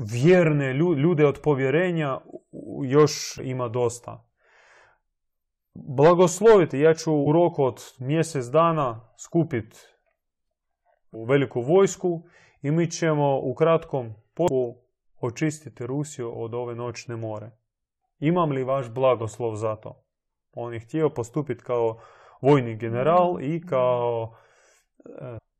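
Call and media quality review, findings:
Damaged data in a compressed stream in the speech: brief glitches at 3.38 s (before "ima dosta"), 7.26, 11.13, 14.48 (after "mi ćemo u kratkom") and 25.37–25.39 s. Decoder misreads corrupt frames and resyncs. Spectrogram: thin vertical broadband streaks; waveform: spike or tiny gap.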